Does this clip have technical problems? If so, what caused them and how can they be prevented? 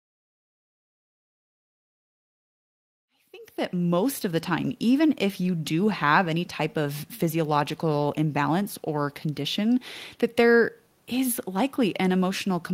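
No, the speech signal shows no technical problems, and the level rises in a smooth fade from around 3 s until 4.25 s with no click or hard edge.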